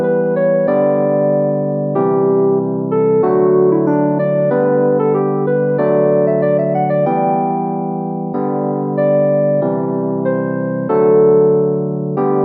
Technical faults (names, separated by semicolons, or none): none